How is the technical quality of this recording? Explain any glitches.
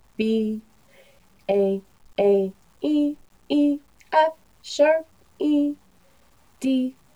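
The recording has one technical fault, present throughout. The audio is grainy, with a noise floor about 45 dB below the signal. The likely cause is low bit depth without dither, about 9 bits truncated, so the rounding error follows the signal and quiet passages turn gritty. On a spectrogram this appears as broadband noise that rises and falls with the sound. A zoomed waveform shows coarse, stepped levels.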